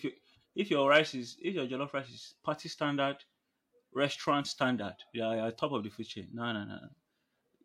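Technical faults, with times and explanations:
No technical faults can be heard anywhere in this speech recording.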